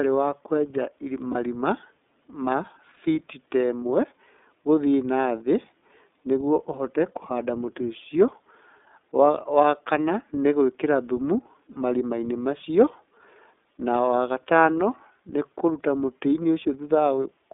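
Throughout, the speech passes through the iLBC codec, which fits its 13.33 kbps, 30 ms frame mode. The band is held to roughly 200 Hz to 3.6 kHz, and the voice sounds plainly rough and synthetic. At 1.32 s, 2.94 s and 11.73 s, lost iLBC frames, about 30 ms each, are concealed by repeating the last pitch cycle, giving a brief buzzy held vowel before clean speech resumes at once.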